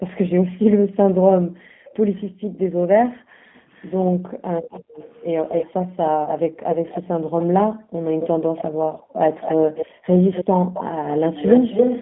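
Speech runs through the G.729 codec for the whole clip, sounding rough and synthetic, and a spectrogram shows energy confined to roughly 150 Hz to 3.5 kHz, with nothing above. Between 0.0 and 4.96 s, and again from 5.87 to 10.98 s, the background is gated by the echo canceller: room sound repeatedly dips by up to about 40 dB, totalling about three seconds and then about two. These dips appear as sudden troughs in the waveform's noise floor. From 1.86 to 1.94 s, a very faint, brief copy of the sound arrives 320 ms late, about 30 dB down. This is likely an echo leak from an imperfectly cancelled loudspeaker path, visible as a faint smear behind the original.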